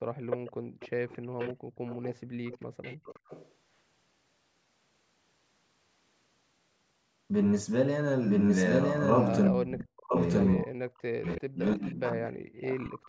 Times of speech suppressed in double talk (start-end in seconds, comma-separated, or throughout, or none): 0.35-0.61, 1.32-1.57, 9.50-13.09